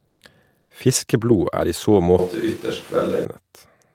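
Short speech recording with two kinds of fault. From 0.07 to 0.21 s, and again from 0.61 to 0.69 s, the quiet background goes flat and featureless for about 140 ms and then 80 ms, at the same level as the real background, which sits about 55 dB under the loudest speech. This is comfort noise in place of the background, likely from Opus discontinuous transmission: the sender stops sending during the pause and the receiver fills it with synthetic noise. From 2.19 to 3.25 s the speech turns abruptly roomy and hollow, with thinner bass and room noise roughly 25 dB below the speech, though its loudness stays about the same. It snaps back just as suddenly. This points to a switch to a distant microphone, likely a far-off pickup standing in for the close one during that stretch.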